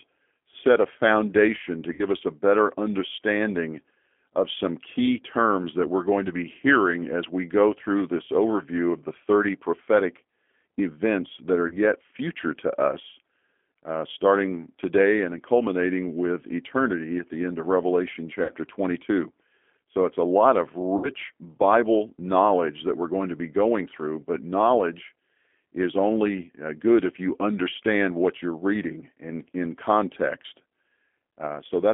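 Speech recorded over a G.729 codec line for the whole clip: the band runs only from about 250 Hz to 3.5 kHz, and the voice sounds rough and faintly synthetic. This comes from an 8 kbit/s model that rebuilds each frame from a filter, a pitch predictor and a few pulses. Simple narrowband filtering would sound thin but clean, so the grainy, synthetic texture marks this as codec damage rather than a band limit alone. VoIP packet loss concealed by the speech codec occurs at 1.93–2.03 s, 11.68–11.77 s, 18.43–18.51 s and 20.97–21.09 s. The first, third and fourth gaps point to about 60 ms of missing audio and the second to about 30 ms. A plain dropout would leave silence or a click. Here the decoder stretches the last sound into a fading buzzy tone or coloured noise, and the voice stays weak for a moment after each gap.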